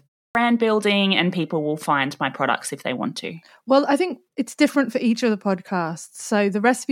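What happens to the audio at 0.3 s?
At 0.30 s a clipped start after a pause occurs: the output device, idle through the preceding 0.3 s of silence, wakes late, swallowing about 50 ms before "building and people will" begins abruptly.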